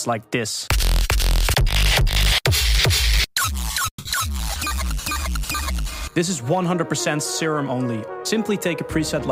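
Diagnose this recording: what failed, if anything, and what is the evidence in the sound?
From 3.88 to 4.07 s the sound breaks up in a way that points to a network fault, most likely a long network dropout. Roughly 200 ms of audio never arrives. The receiver fills about 180 ms of it by extending the last sound as a fading buzz that decays into about 80 ms of near-silence. The audio resumes without the lost portion, and playback lands a few tens of milliseconds earlier than before.

At 6.65 s there is a single sharp tick, broadband and unrelated to the surrounding signal. It is a bit error spike on a digital link or in memory. One sample has a flipped bit, so its value jumps by a power of two for that single sample and returns immediately. The result is an isolated click with energy spread across the whole spectrum and no ringing or repetition around it.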